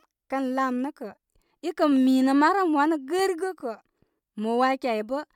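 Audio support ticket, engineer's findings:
Nothing stood out on listening to the speech in this clip.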